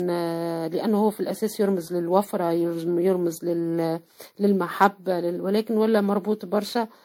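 Across the whole speech clip, a swirly, hollow, smeared quality blurs attacks: likely generation loss from about ten re-encodings, fitting MP3 at 96 kbit/s.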